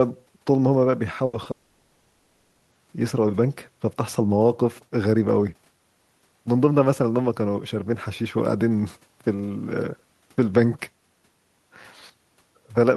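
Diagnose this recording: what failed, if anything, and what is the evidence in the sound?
At 1.25 to 1.35 s the speech smears into a held buzz or fading hiss for about 80 ms before jumping ahead. This is a burst of packet loss on the network path. Consecutive packets failed to arrive, and the receiver stretched the last sound to cover roughly 80 ms of missing audio.

Around 1.43 to 1.47 s there is a brief wobble lasting about 20 ms. This is short concealed packet loss in network transport. One small gap was patched by extrapolating the preceding sound and then blending back into the real signal, so that stretch is missing.

From 1.51 to 2.73 s the sound is replaced for about 1.2 s by a synthesised continuation, never true silence, before speech resumes further on. This is a long network dropout, likely an outage where nothing arrived and the receiver filled the entire 1.2 s with concealment.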